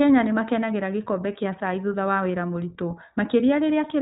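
From start to finish the speech has passed through the iLBC codec, a narrowband VoIP coder that handles each short frame on its own, here in 20 ms blocks, with a rate that fits about 15.2 kbps. Because nothing above 4 kHz survives, the sound is muffled and telephone-like. The damage is plainly audible: the voice stays intelligible but takes on a rough, slightly synthetic grain, as each independently coded frame approximates the excitation imperfectly.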